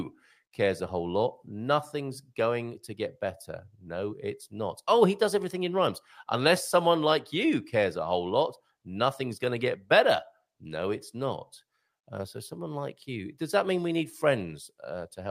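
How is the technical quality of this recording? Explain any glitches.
Nothing stood out on listening to the speech here; no technical glitches were heard.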